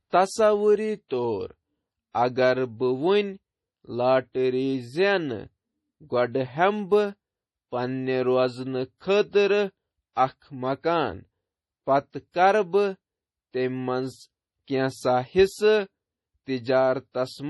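From start to finish the speech carries heavy damage of the kind MP3 compression leaves, likely from an encoder starved of bits, at a level that fits a bitrate around 32 kbps. Nothing remains above 11.5 kHz, and the sibilants turn swirly and watery, with metallic chirps and softened attacks. A plain low-pass filter would dull the top just as cleanly but leave the rest steady. Here weak components flicker in and out from moment to moment.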